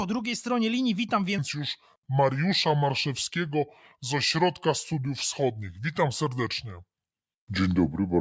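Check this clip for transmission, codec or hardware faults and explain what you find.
One fault is present: a wrong sample rate. From 1.38 s, just after "drugiej stronie linii witam", to the end, the speech plays at about 0.73 times its proper speed and about 5.6 semitones low. Speed and pitch drop together, fitting 22 kHz audio played at 16 kHz without conversion.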